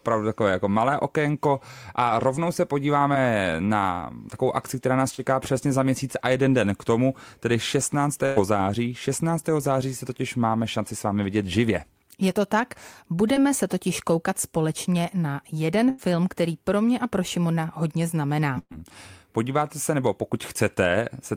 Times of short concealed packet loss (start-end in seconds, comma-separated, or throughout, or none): 3.13-3.17, 5.15-5.20